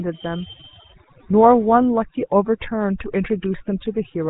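Throughout the speech, overdone noise removal is at work. A noise reducer set far too strong pulls individual frequency bands down to nothing whenever they sit near its noise estimate. The background drops and breaks up into twinkling specks. Quiet parts of the voice vanish too.

The whole clip also passes through the GSM full-rate codec. Its damage is plainly audible, with a buzzy, gravelly roughness that fits a 13 kbps GSM coder. The voice is rebuilt from a vocal-tract model driven by spaced pulses. Nothing survives above 3.8 kHz, so the top end sounds cut off.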